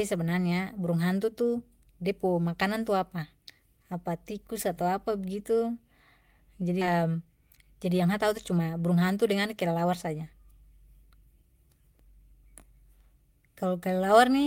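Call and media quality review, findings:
Skip ahead at 6.81 s: playback jumps forward with no fill, losing about a second of speech, and the two sides butt straight together. Probably the jitter buffer overflowed and dumped queued audio, though loss in transit would sound the same.

Jitter buffer speed-up from 6.91 to 11.44 s: speech runs at about 109% with pitch unchanged, so it sounds a bit rushed. The buffer's trimming short pitch-period chunks over and over to burn off excess delay, around 400 ms in total.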